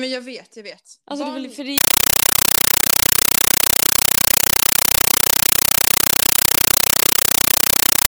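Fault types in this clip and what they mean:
Compressed stream played as audio: the AC-3 (Dolby Digital) data went to the output as plain samples with no decoding. From 1.78 s, just after "det väl för det", to the end, the speech gives way to very loud, chattering static, 8 ms noise bursts repeating 31.25 times a second.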